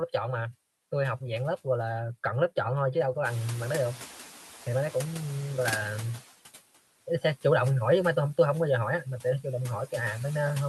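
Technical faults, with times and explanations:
Throughout: noise suppressor artifacts. Frame-by-frame gain cuts steady noise by about 12 dB, so it dips between phrases and swells under speech.
3.25–6.2 s: noise suppressor catching up. The room noise jumps around 3.5 s and the lagging noise estimate lets it through before it settles about 8 dB lower over 2.95 s.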